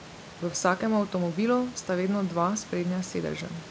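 No faults: the speech sits about 20 dB above a room noise floor, and the band stops at 8 kHz, which fits a G.722 call path at 64 kbps.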